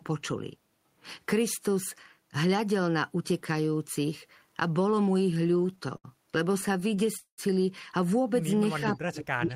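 From 5.31 to 7.09 s, packets arrive later and more slowly than they are played out, so the jitter buffer keeps running dry. The result is repeated stalls (stutter): 21 short gaps across that span, the longest 71 ms, which the receiver bridges by stretching the last sound. Together they add about 275 ms of filler, roughly 15 percent of the stretch, with nothing actually lost. The sound drags and hiccups unevenly.

At 7.17 s the stream halts outright, most likely because packets were held up in transit and the buffer emptied. This call audio freeze lasts until 7.40 s. The last sound is carried on as a fading buzz or hiss that sinks into about 90 ms of silence. When delivery resumes, the audio picks up exactly where it stopped, now sitting 208 ms later than before, with nothing skipped.

From 8.93 s to the end of the clip, the echo canceller appears to clamp down during double talk. It likely could not separate the local talker from loudspeaker echo while both sides spoke, so it attenuated everything. 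This shows up as speech suppressed in double talk: the speech dips, falling at its deepest by something like 35 dB, so parts nearly vanish.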